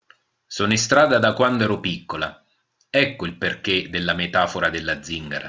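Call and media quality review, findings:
Resampler restarted on every block, throughout. Steady buzz at 100 Hz riding on the speech, absent in pauses. Probable component: 24 kHz to 16 kHz sample-rate converter processing 10 ms blocks independently, filter state reset each block. Edge samples computed without true neighbours, so small error at every boundary, repeating 100 times a second. Fix: keep converter state across blocks.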